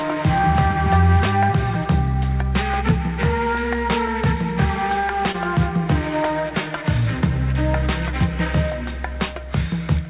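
At 5.32 to 5.36 s, a short concealed packet loss: 20 ms never arrived, so the receiver extended the preceding sound before blending back, leaving a brief smear.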